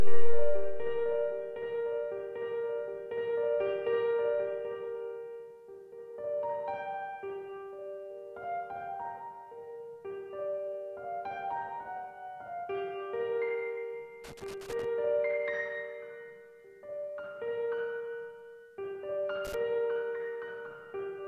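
A worn or dirty contact making and breaking causes loose connector crackle, chopping the sound into irregular scratchy bursts at 14.24–14.85 s and again at 19.45–19.54 s.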